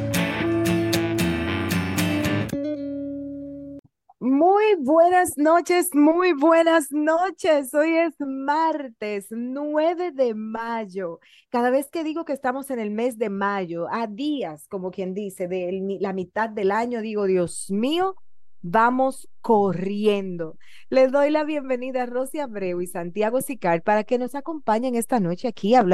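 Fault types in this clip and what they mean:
DC step: the waveform's zero line suddenly shifts, as when a converter recalibrates or an offset input is switched in. At 17.48 s the zero line steps by about -38 dBFS, giving a single low thump, and the offset then holds to the end while the sound carries on unchanged.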